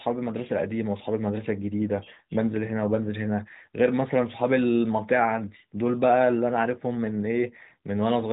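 No technical faults can be heard anywhere in the speech. It has passed through the AMR narrowband mobile codec at what sounds like the 12.2 kbps mode, so nothing above about 3.8 kHz remains and the codec's light coloration can be heard.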